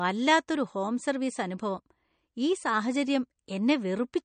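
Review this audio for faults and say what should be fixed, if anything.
The speech was likely squeezed through a low-bitrate MP3 encoder, and the damage is plainly audible throughout the clip. Short of bits, the encoder cut the treble at a fixed point, so nothing is present above 9.1 kHz, and it zeroed weak frequency lines that switch on and off from frame to frame. That gives the voice a watery, swirly texture, which fits a bitrate around 40 kbps. To prevent it, keep the audio uncompressed or encode at a much higher bitrate.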